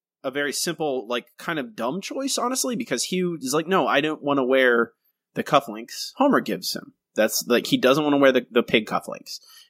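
From 0.33 s to 4.9 s the automatic gain is rising: the gain control judged the input too quiet and kept lifting its gain, about 9 dB in total. The speech and the background noise swell together slowly over those four and a half seconds.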